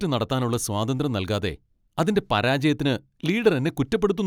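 No technical faults are audible anywhere in the speech.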